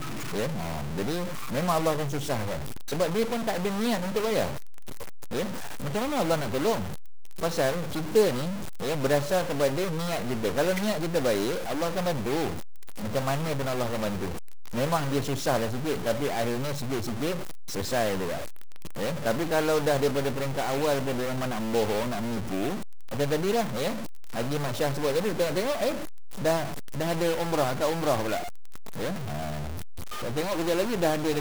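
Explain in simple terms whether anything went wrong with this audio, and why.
A stuck bit runs through the whole recording, from start to finish. It sounds like a harsh, buzzy roughness on top of everything, and even the quiet gaps are filled with a steady hiss-like noise. The likely cause is a broken connection or converter fault that holds one digit of each stored number fixed. About half the values are then pushed off by the same amount, and because that digit sits fairly high, the added noise is clearly audible.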